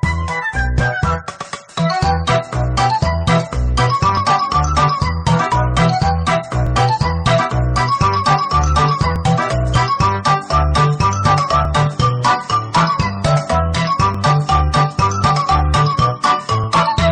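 Audio missing between chunks occurs at 1.68, 4.17, 6.67, 9.16, 11.65, 14.14 and 16.64 s: tiny skips every 2.5 s, each losing a few milliseconds with the edges butted together. The likely cause is a processor dropping samples at each chunk boundary.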